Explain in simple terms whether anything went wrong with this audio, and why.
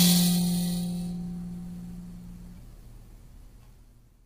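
Something did go wrong, and it lasts the whole clip. The music sounds rough and grainy from start to finish. There is a hiss sitting between the tones, where there should be quiet. The brightest part of the sound is gone, with nothing above 15.6 kHz. The likely cause is heavy low-delay AAC compression, the kind made for video calls. It cuts sound into very short slices to save time, and that loses fine detail.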